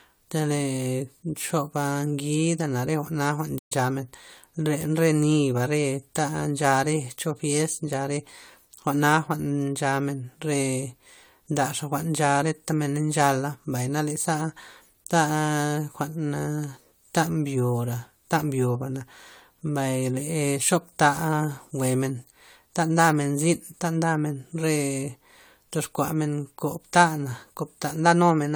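Speech with generation loss throughout: a swirly, hollow smear and blurred attacks beyond what a single lossy encode would give, likely from around four successive passes through an AAC codec. A playback stall leaves the sound silent from 3.58 to 3.72 s before it resumes, likely because the player ran short of data. A dropout would instead skip content.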